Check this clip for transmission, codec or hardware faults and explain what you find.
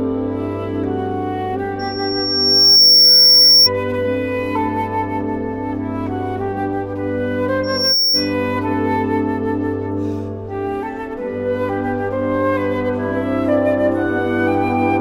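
Loudspeaker feedback squeal occurs twice, at 1.79 to 3.69 s and 7.63 to 8.34 s. A microphone is hearing the loudspeaker it drives, and around 5.5 kHz the loop gain goes above one, so that frequency feeds on itself. Each time, a piercing single tone swells up. The first builds over about a second and rises roughly 10 dB above the sound before cutting off. The second climbs faster and peaks lower.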